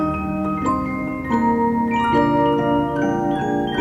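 Short sound clip with damaged data in the compressed stream: quick glitchy blips at 0.68 to 0.70 s and around 3.35 s, where the decoder misread corrupted frames and lost sync briefly.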